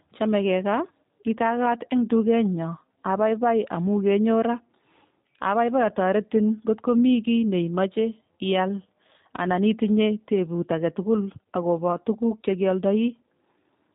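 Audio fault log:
Throughout: G.729 codec. The speech has been squeezed through a low-rate VoIP coder, and the damage is plainly audible. Nothing passes above 3.8 kHz, so consonants lose their crispness. The coder rebuilds each 10 ms frame from a vocal tract filter, a pitch predictor and a few pulses. That sparse excitation gives the voice a rough, slightly synthetic texture. The character fits G.729A at about 8 kbit/s.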